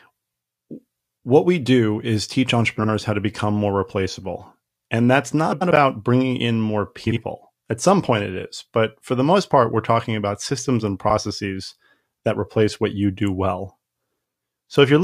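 Frames out of order occur in this speech clip at 2.79 to 2.89 s, 5.52 to 5.71 s just before "bringing in more", 7.06 to 7.17 s right after "bringing in more", and 11.09 to 11.18 s after "talking about systems and". Each time, two adjacent blocks of about 46, 93, 46 and 70 ms were decoded in swapped order. The halves play exchanged, giving a garbled flutter, though no time goes missing.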